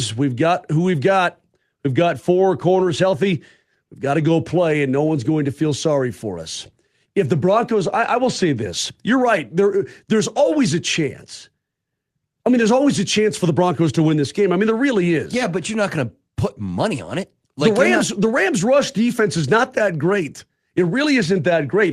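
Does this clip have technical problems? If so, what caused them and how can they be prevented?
No, no technical faults heard.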